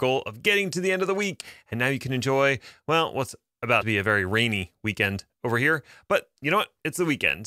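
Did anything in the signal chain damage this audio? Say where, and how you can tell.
Yes, at the codec or storage stage, with a likely broken MP3 bit reservoir. At 1.40–1.43 s, after "the end of the," and at 3.80–3.83 s, between "can enjoy well what's" and "be a very rainy," the sound skips forward in a disturbance lasting about 30 ms. That fits lost frames of about 26 ms each, where the next frame decoded borrowed bytes from the wrong frame. A plain dropout would leave clean silence instead.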